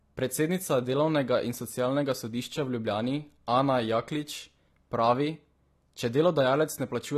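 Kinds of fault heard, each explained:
AAC compression: The speech sounds dull and smeared, with nothing above 13 kHz and a warbly, fizzy edge, likely from low-bitrate AAC-LC around 32 kbps.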